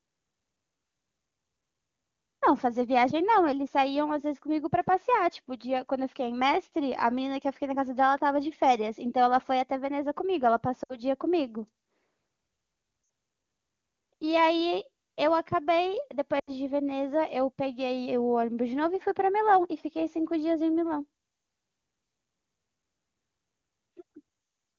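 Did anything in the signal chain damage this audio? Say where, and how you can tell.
Yes. Speech briefly smears and fades at 10.83–11.00, 13.03–13.09 and 16.39–16.51 s: lost AMR speech frames over the radio link, which the decoder concealed with fading repeats of the last good frame.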